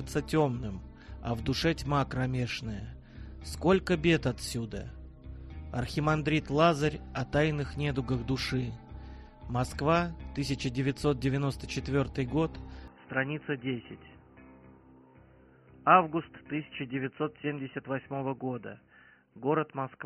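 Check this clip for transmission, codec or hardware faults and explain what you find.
One fault is present. From 12.88 s to the end, the input likely switched to a poorer device whose narrower path passes nothing above 3 kHz. The sound turns dull and boxy with no gap, at about the same level, over a faint new noise floor.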